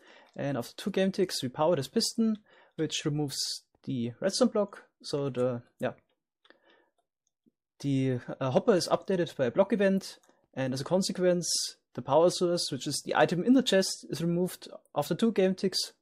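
At 3.43 s, lost LE Audio frames: a single 10 ms gap was concealed by repeating the previous spectrum with randomised signs, giving a brief noisy smear rather than a silent dropout or click.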